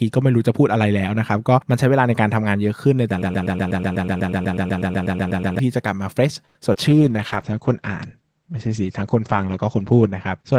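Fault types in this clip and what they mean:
Broken-record loop, 3.22 to 5.59 s: A fragment of about 0.12 s repeats exactly, back to back, 19 times, producing a stuttering, mechanical cycle for over two seconds. The cause is likely a stall in the player, encoder or stream that kept resending the last piece it held. Whatever should have played during those two-plus seconds never arrives, so the speech resumes with that stretch missing.
Short stall from a late packet, 6.45 to 6.57 s: A packet arrived late, and the jitter buffer emptied while waiting for it. The receiver bridged the gap by stretching the last sound for 96 ms, then continued from exactly where it paused, so nothing is lost. What you hear is a sound held unnaturally long, and the stream now runs 96 ms later than before.
Short concealed packet loss, 6.61 to 6.63 s and 6.73 to 6.76 s: Two brief holes, 20 ms and then 40 ms of audio, never reached the decoder in time. 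The receiver extended the preceding sound to cover them and blended back into real audio, producing quick smears. Here the concealment is very short, so the receiver effectively skips ahead, pulling the delay back by roughly 20 ms and then roughly 30 ms.
Jitter buffer slow-down, 6.89 to 7.13 s: With its reserve running low, the receiver rebuilt it by repeating single pitch periods and slivers of pauses many times over. This adds 43 ms and slows playback to about 85% speed without changing pitch. Sounds in this quarter-second come out drawn out.
Call bitrate drop, 6.91 s onward: The bandwidth estimate fell, and the encoder was pushed from 32 kbps down to 11 kbps, staying at that floor for about 3.2 s. The coarser coding gives the speech a rough, watery quality. The audio bandwidth also narrows from 20 kHz to 8 kHz, stripping the upper highs so the speech sounds duller from here to the end.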